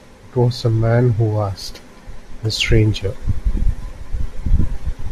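No audible technical faults.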